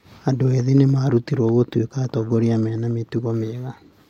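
Nothing in the speech signal points to a technical fault: level, continuity and timing hold steady for the whole recording.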